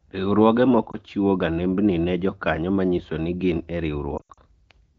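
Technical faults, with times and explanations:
0.92–0.97 s, lost AMR speech frames: a quick dip and slight warble just before "chiwo ga nembni". A single 20 ms frame went missing, and the decoder bridged it by reusing the previous frame's pitch and vocal tract settings at lower gain.
4.17–4.39 s, lost AMR speech frames: right after "manyiso ni gin e" the sound smears, sags and turns rough. About 140 ms of frames dropped out across roughly 200 ms, with the longest gap at 80 ms. Each gap gets stretched and faded from the last good frame, and the clean wideband signal comes back weak each time it resumes.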